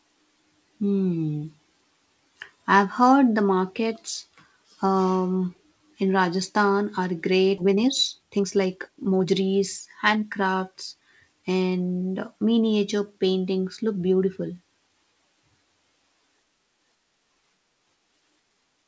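At 7.58 s the sound skips ahead. About a second and a half of audio is simply gone. It was dropped while later audio was already queued. Nothing fills the hole. The two sides butt together almost directly.

From 7.62 to 11.60 s comes a jitter buffer speed-up. The buffer was holding more audio than it aims for. To shed the excess, it kept cutting tiny pitch-period slices, about 0.7 s in total. Speech runs at 119% speed. The pitch stays put, but delivery sounds rushed.

Through the call path the G.722 codec caps the band at 8 kHz.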